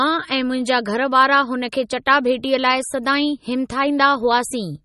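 Heavy MP3 compression at a low bitrate, likely around 32 kbps, has starved the encoder of bits across the whole speech clip. It cuts off everything above about 11.8 kHz and drops weak frequency lines frame by frame, leaving a plainly audible watery swirl, chirpy sibilants and smeared attacks.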